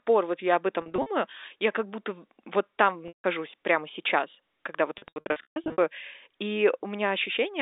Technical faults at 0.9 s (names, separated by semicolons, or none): packet loss with pitch repetition